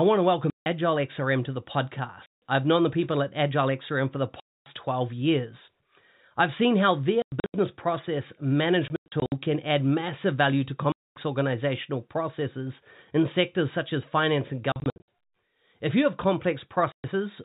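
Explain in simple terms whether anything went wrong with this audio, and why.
Packet loss filled with silence chops the speech eight times: at 0.5 to 0.66 s, 2.26 to 2.42 s (just before "I've known the people"), 4.4 to 4.66 s (right after "for the"), 7.22 to 7.54 s (after "I've seen how"), 8.88 to 9.32 s, 10.92 to 11.16 s, 14.72 to 15.08 s and 16.92 to 17.04 s. Small chunks of audio went missing on the way, and the receiver played dead quiet in their place, leaving abrupt holes.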